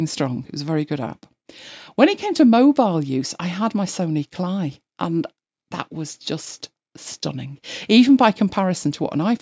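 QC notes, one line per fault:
No faults to log on this speech clip; it has simply passed through a call's microphone processing, so the lowest bass is trimmed and there's nothing above 8 kHz, which is just how that path sounds.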